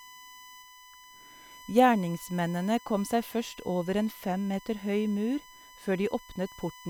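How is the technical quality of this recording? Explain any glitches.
The recording is marred by a steady USB whine running through the whole speech clip. A fixed 1 kHz tone sits roughly 25 dB below the speech, leaking in as the USB bus pulls current in regular 1 ms frames through shared power or ground. It is heard as a thin, constant whistle, and a spectrogram would show an unbroken horizontal line at 1 kHz beneath the speech energy.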